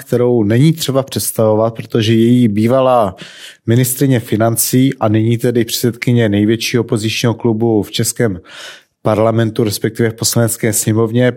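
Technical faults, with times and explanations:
No technical faults can be heard anywhere in this speech recording.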